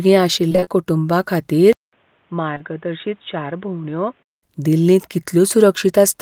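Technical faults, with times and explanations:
0.49–0.68 s, repeated packet loss (robotic sound): In under a fifth of a second, five chunks of audio go missing, the longest about 24 ms. Each hole is patched by stretching the sound just before it, so nearly half of this stretch is synthetic fill. The real and patched pieces alternate quickly. That gives a choppy, mechanical, robotic texture with bits of the sound dropped.
1.73–4.43 s, input switched to a poorer device: A silence of about 200 ms opens this span. Then the sound returns duller and boxier, with nothing above 3.8 kHz. It is roughly 10 dB quieter and carries a new background hiss, roughly 35 dB under the signal. This likely comes from the input changing to a narrower-band microphone or a headset call profile. At 4.43 s the fuller sound comes back.
2.54–2.58 s and 2.58–2.62 s, short concealed packet loss: Two back-to-back gaps of about 20 ms each occur inside the duller stretch. 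The receiver covers each one by carrying the last sound forward, then blends back into the real audio. Each patch is heard as a brief smear or wobble. Back to back, they form one slightly longer blur, and a short sound there can be lost.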